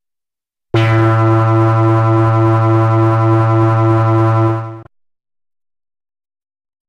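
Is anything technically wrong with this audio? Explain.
No, nothing is technically wrong with this audio.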